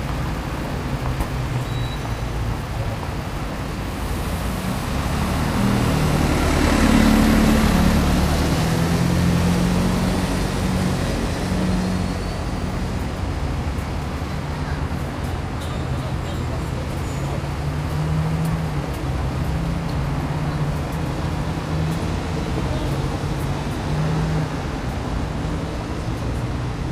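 From the start to 6.05 s, one line of the data path is marginal, a fault best described as an unreliable data bit: that bit flips at random in a share of samples, and every wrong sample jumps by the same fixed step of about -29 dBFS. The result is a steady crackle or fizz laid over the sound, present even in quieter moments because the errors do not depend on the signal, and it stops at 6.05 s.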